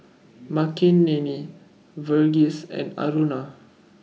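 Nothing in this bit of speech stands out as a technical fault; it just runs along without any glitch worth pointing to.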